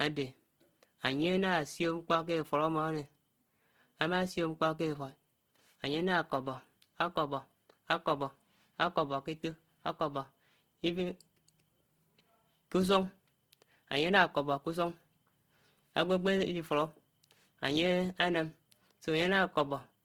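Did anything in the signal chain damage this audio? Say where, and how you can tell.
Yes, at the codec stage, throughout. The speech sounds rough and grainy, which is likely Opus compression in CELT mode at a rate that suggests about 16 kbps. On a spectrogram, bands are filled with noise-like grain rather than holes, and content reaches 20.2 kHz.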